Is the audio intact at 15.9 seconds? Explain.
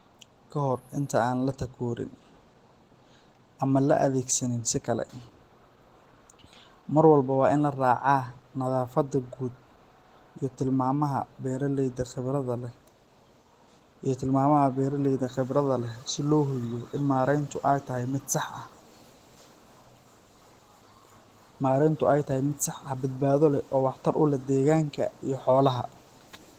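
No. Opus voice compression runs throughout, including 15.9 s. The low-band linear-prediction coding at a rate fitting about 16 kbps audibly muffles the speech and leaves it hoarse and slightly robotic.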